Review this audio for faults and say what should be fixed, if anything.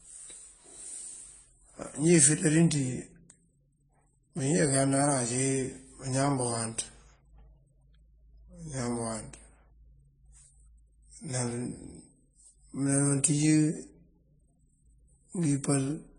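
Throughout the speech, nothing is heard above 10 kHz. Two different sets of codec artefacts are layered together. This is likely transcoding between lossy codecs, consistent with low-rate MP3 re-encoded to AAC. Encode once, directly from the original source.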